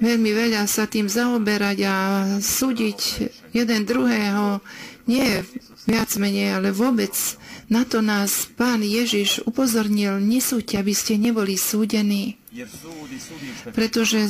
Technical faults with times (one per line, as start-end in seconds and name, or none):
5.19-6.17 processor overload crackle